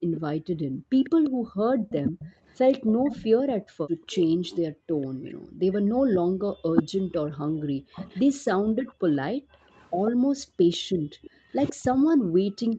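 A speech recording with three kinds of fault, all tied to echo cancellation on a call. First, speech suppressed in double talk runs from 0.1 s to 12.26 s. The voice dips in pieces, adding up to about three seconds. At its worst it falls by about 40 dB. The likely cause is an echo canceller that could not tell this talker from loudspeaker echo while both sides spoke. So it turned everything down at once. Second, there is an echo leak: a faint copy of the voice trailing it by 144 ms. It runs from 0.18 s to 3.16 s and again from 9.75 s to 12.75 s, about 15 dB below the speech. Two brief scraps follow at 5.02 to 5.06 s and 8.1 to 8.21 s, far fainter. This is likely a loudspeaker at one end whose canceller left part of the pickup in the signal. That part was then sent back. Third, the background is gated by the echo canceller. The room sound drops by about 40 dB in stretches between 0.49 s and 1.89 s, under a second in all. 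It drops again from 10.1 s to the end. The canceller clamps the microphone while the loudspeaker plays, then lets go. Throughout, the call path's 8 kHz band limit holds the top end.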